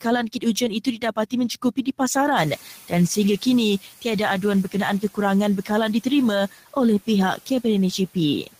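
Between 0.28 and 1.33 s, and again from 1.49 to 1.87 s, you get speech cut by the noise suppressor. It's mistaking bits of speech for background and pulling them down by up to about 12 dB, so soft edges sound swallowed and faint. From 2.36 to 3.84 s the noise suppressor is catching up. The room noise jumps by roughly 24 dB around 2.5 s, and the suppressor's estimate lags, so that noise leaks through before sinking about 6 dB over roughly 1.5 s.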